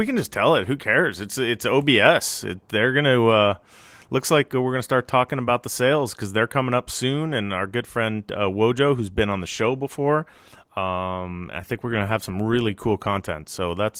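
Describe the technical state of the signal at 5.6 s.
At 5.6 s the speech is intact, with no fault, and the Opus voice compression carrying it leaves only light coding damage there.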